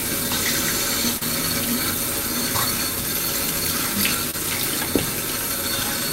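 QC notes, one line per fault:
1.17–1.23 s, short concealed packet loss: a brief smear in the sound, where about 40 ms of audio arrived too late and the receiver filled 34 ms by extending the preceding sound.
4.31–4.35 s, short concealed packet loss: a quick wobble where about 20 ms went missing; the decoder bridged 23 ms with continued audio, then blended back.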